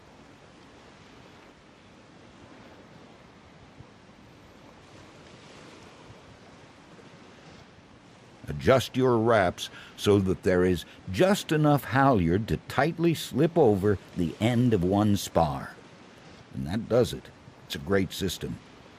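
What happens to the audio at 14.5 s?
A drift correction step likely jumps the playback rate up 5.5% from 13.70 to 15.41 s, so the sound runs fast, sharp by nearly a semitone, then snaps back.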